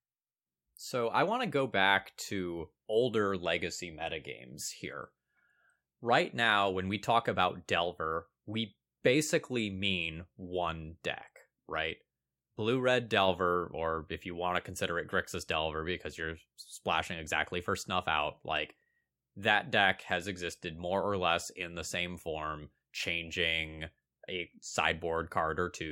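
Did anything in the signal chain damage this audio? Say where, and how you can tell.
No, nothing in the chain damaged this speech.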